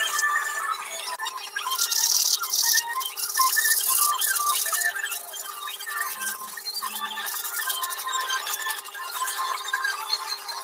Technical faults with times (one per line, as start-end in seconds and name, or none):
0.00-10.63 noise suppressor applied to music or sounds
1.43-1.60 sound cut by the noise suppressor
5.19-5.92 sound cut by the noise suppressor
6.34-6.71 sound cut by the noise suppressor
8.80-8.97 sound cut by the noise suppressor